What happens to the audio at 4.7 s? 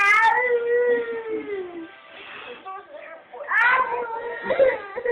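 At 4.7 s the call is in a bitrate drop: the bandwidth estimate fell and the encoder went from 48 to 7 kbps, from 3.67 s to the end at 5.12 s. Audio above 4 kHz is gone, so the sound turns muffled and coarse, with a rough, watery texture.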